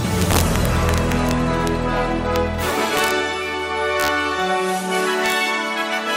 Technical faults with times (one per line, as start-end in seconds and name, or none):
0.21-1.31 integer overflow
1.67 integer overflow
2.36 integer overflow
2.97-3.11 integer overflow
4.00-4.08 integer overflow
5.26-5.32 integer overflow